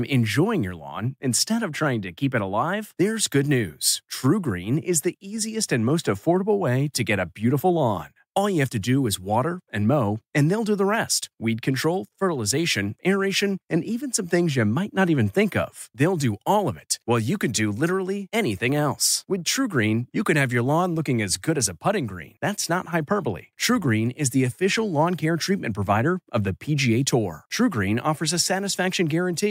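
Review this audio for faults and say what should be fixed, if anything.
From 18.04 to 24.58 s, between "while you can do" and "lawn care treatment provider", the resampler restarted on every block. Each 10 ms block's 44.1 to 48 kHz conversion errs at its edges, giving a 100 Hz buzz. A spectrogram shows thin vertical lines every 10 ms.

Fix it by running one continuous resampler whose filter state carries across block boundaries.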